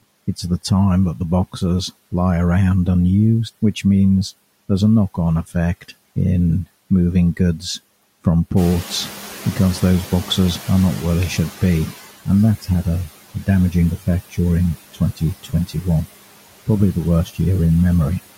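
Noise suppressor artifacts run through the whole speech clip: the background is pulled down by about 16 dB between words and swells back under them. When the room noise jumps by about 14 dB near 8.5 s, the noise suppressor is catching up from 8.56 to 12.0 s. The louder noise passes through at first, then sinks as the estimate adapts over 3.44 s, to about 12 dB of reduction. This is a slow slide, not the rapid frame-to-frame pumping heard elsewhere. Speech cut by the noise suppressor follows at 14.92 to 15.22 s (dips of about 18 dB), 15.43 to 15.85 s (about 14 dB) and 17.25 to 17.39 s (about 12 dB). Brief stretches of roughly a tenth to a fifth of a second are swallowed, so parts of the voice sound faint, turned down along with the background noise.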